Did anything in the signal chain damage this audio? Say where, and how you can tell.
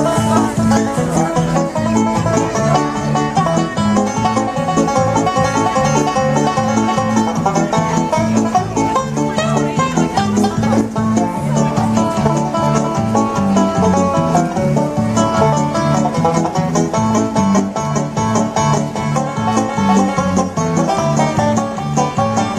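No, nothing in the signal chain audibly damaged this audio.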